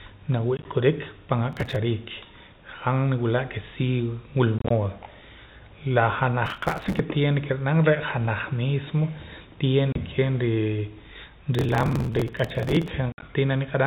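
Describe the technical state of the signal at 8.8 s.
At 8.8 s the signal is intact, with the speech passing cleanly through G.711 telephone coding, so it carries that path's 4 kHz band limit and faint level-following quantisation noise but no fault.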